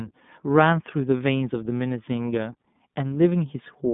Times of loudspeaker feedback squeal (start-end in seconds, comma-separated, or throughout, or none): none